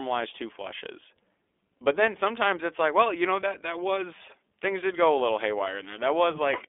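Throughout the speech, the signal has passed through the iLBC codec, which codes each short frame independently on a narrowband line of roughly 300 Hz to 3.5 kHz. Nothing above 3.7 kHz survives, so the voice sounds muffled, with a plainly audible rough, synthetic edge.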